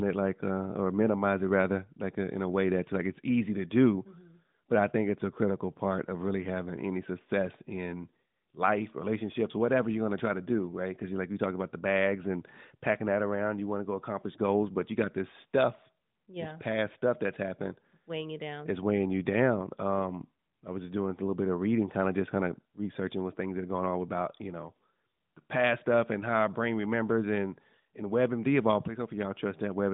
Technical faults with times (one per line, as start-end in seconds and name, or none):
none